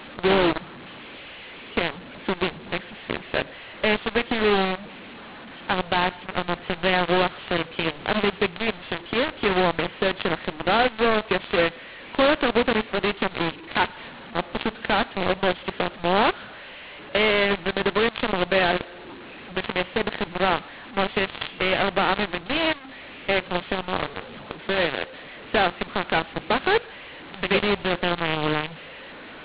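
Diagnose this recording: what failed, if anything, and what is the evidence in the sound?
The codec stage shows mu-law and A-law mixed up throughout: harsh, level-scrambled speech with hissy pauses, which points to A-law telephone bytes being expanded with the mu-law curve.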